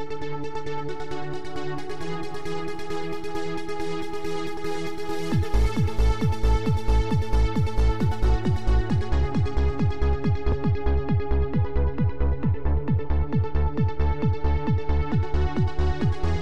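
Audio missing between chunks shows up as two abrupt skips, at 4.57 s and 10.52 s, where roughly 50 ms of the audio vanishes and the material on either side is butted together with no gap of silence. The skips fall almost exactly 6 s apart. The likely cause is a recorder or processor working in 6-second blocks and dropping a short stretch each time it closes one block and starts the next.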